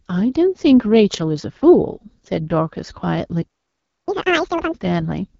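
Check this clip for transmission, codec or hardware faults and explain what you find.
Two faults are present. Throughout the speech, the AMR wideband (HD Voice) codec is running at a low rate, which fits roughly 8.85 kbit/s. Its pulse-excited vocal tract model leaves the voice plainly rough and raspy, with nothing above 7.6 kHz. From 4.08 to 4.74 s there is catch-up at higher speed: the player resamples its backlog at 2.0 times speed, lifting pitch by about ten semitones before normal playback resumes.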